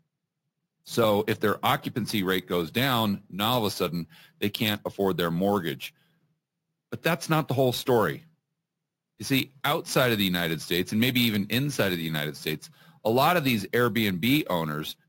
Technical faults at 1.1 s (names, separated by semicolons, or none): imaging from sample-and-hold upsampling